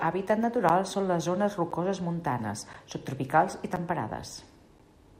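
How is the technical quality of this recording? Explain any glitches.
The recording has one recurring glitch. Periodic USB or driver dropouts: from 0.69 to 4.8 s, something stalls the audio path every 1.02 s, blanking around 10 ms with silence about five times, heard as regular ticks in the speech.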